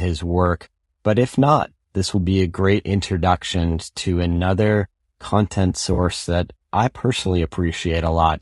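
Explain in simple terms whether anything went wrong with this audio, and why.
Yes, two things went wrong. Throughout, the speech was likely squeezed by low-delay AAC compression, the kind used for video calls, which works in very short slices and struggles to keep voice detail, so the voice sounds rough and grainy with a dulled, artificial top end.

At 5.93 to 5.99 s, just after "introduction to another content" and before "that I", there is AAC frame loss with concealment. About 40 ms of audio went missing, and the decoder patched the gap from the last good moment, leaving a brief smeared, noisy blip.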